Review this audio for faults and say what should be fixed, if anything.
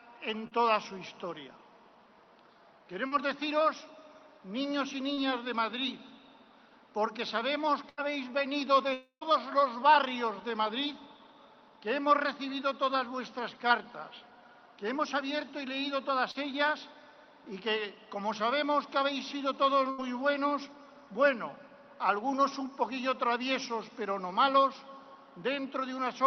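Short concealed packet loss occurs at 0.47–0.53, 3.07–3.13, 5.13–5.19 and 16.31–16.37 s. Each time about 40 ms of audio failed to arrive. The receiver extended the preceding sound to fill the hole, leaving a brief smear or wobble. A deeper jitter buffer or forward error correction would prevent it.

A burst of packet loss hits at 7.89–7.99 s and again at 19.91–20.00 s. About 80 ms went missing each time. The last sound was stretched and faded into a buzz or hiss, then the audio jumped ahead. Redundant encoding or a steadier network link would prevent it.

At 8.93–9.23 s the audio drops out for about 280 ms, likely a long network dropout. The held sound fades away, about 100 ms of silence follows, and the audio resumes with that stretch lost. A more stable connection would prevent it.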